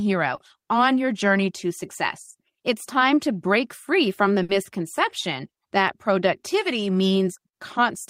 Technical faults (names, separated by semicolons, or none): short concealed packet loss; burst of packet loss